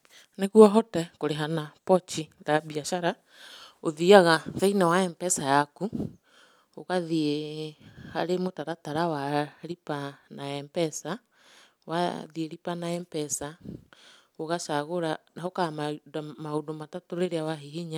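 No technical faults occur at any point in the recording, so there is nothing to describe in time order.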